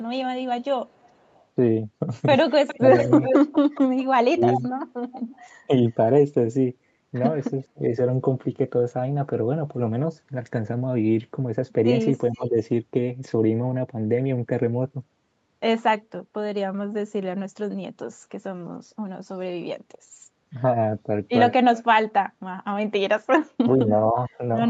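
From 0.87 to 5.43 s a delayed copy of the speech trails the original by about 0.41 s at only about 5 dB below it. This is an echo leak, likely from a far-end loudspeaker whose echo canceller let its microphone pickup return down the line. A much fainter repeat, roughly 30 dB down and delayed about 0.45 s, recurs between 12.34 and 12.68 s.

Overlapping that first echo, from 3.06 to 5.72 s, the talker's level dips in pieces totalling around 0.3 s, falling as far as roughly 35 dB. This is speech suppressed in double talk, likely the canceller attenuating everything while both sides overlap. Shorter dips follow at 7.73 to 7.80 s (about 25 dB), 12.31 to 12.58 s (about 20 dB) and 23.65 to 24.43 s (about 10 dB).

From 19.95 to 20.49 s the room sound sinks by about 8 dB for roughly half a second, then recovers. This is background gated by the echo canceller clamping the microphone while the loudspeaker played.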